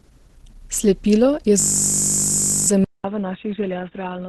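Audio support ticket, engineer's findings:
Whole clip, 0 to 4.3 s: speech grainy, rough and hoarse, nothing above 12.2 kHz. Spectrogram shows noise-filled, smeared bands below a hard ceiling. Likely Opus compression in hybrid mode, at a low rate pointing to about 12 kbps.

1.6 to 2.68 s: system hang loop, steady buzz at 50 Hz. Waveform shows one identical 20 ms segment tiled end to end; spectrogram shows vertical striping and harmonics at 50 Hz spacing. Driver stalled while hardware cycled a short ring buffer.

2.84 s to end: 200 ms dropout, then dull, boxy speech about 5 dB quieter. Spectrogram shows a band cut at 3.8 kHz and a new noise floor roughly 45 dB below the speech. Cause likely a mid-recording input switch to a poorer device.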